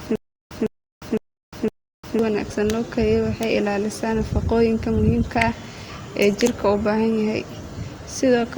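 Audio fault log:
0.00–2.19 s, stutter with silent gaps: already under way at the start, a 156 ms speech fragment repeats four times at a steady 509 ms period, each followed by 353 ms of digital silence. This is likely a stalled stream replaying its last buffer. Playback continues from "wanaagsan loo".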